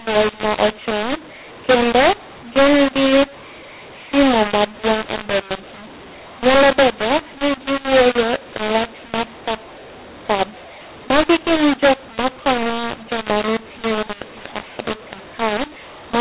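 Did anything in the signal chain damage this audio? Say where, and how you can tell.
Yes. Throughout, the speech is harsh and distorted and the pauses hiss, because at the codec the A-law stream was decoded as mu-law, a mu-law and A-law mix-up.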